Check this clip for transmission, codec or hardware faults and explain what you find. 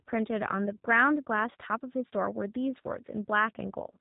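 One codec fault runs through the whole clip. G.729 codec, throughout: the speech sounds like it was rebuilt at 8 kbit/s from a vocal-tract filter and sparse pulses. It is plainly rough and synthetic, with nothing above 3.8 kHz.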